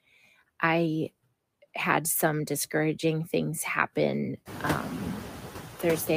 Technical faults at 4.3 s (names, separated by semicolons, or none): noise suppressor artifacts